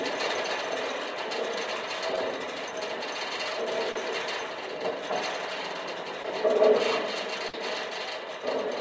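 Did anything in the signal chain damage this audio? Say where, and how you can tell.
Yes. Short concealed packet loss occurs at 2.16–2.18 s, 3.92–3.96 s and 6.23–6.25 s, at the network stage. Each gap of 10 to 30 ms reached the decoder too late, and the receiver bridged it by extending the preceding sound, leaving a brief smear or wobble in the audio.

A burst of packet loss at 7.48–7.54 s, also on the network, removed about 50 ms of audio. The receiver stretched the last sound across the hole while fading it down, so a held buzz or dying hiss replaces that stretch before playback resumes past the gap.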